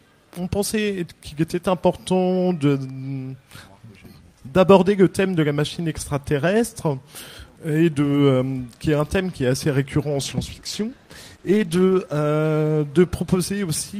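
From 10.21 to 12.05 s a call bitrate drop makes the sound rough and muffled, which fits the encoder falling from around 48 to about 14 kbps. A spectrogram shows the upper band suddenly cut away and coarser, smeared detail until recovery.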